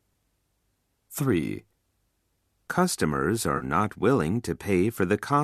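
A short speech recording with one fault: AAC frame loss with concealment from about 3.57 to 3.64 s. Roughly 40 ms of audio went missing, which fits four short codec frames. The decoder papered over the gap by reusing the last good spectrum, so you hear a brief smeared, noisy, phasey patch rather than a hard dropout. The light coding texture around it is likely from low-delay AAC-ELD at about 64 kbps.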